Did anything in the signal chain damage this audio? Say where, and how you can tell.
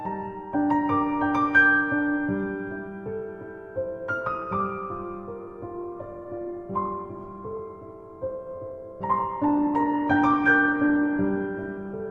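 Yes: from 5.40 s to the end, codec artefacts suddenly rise without any gap, an adaptive stream at a lower bitrate; the codec apparently dropped from about 64 to 16 kbit/s.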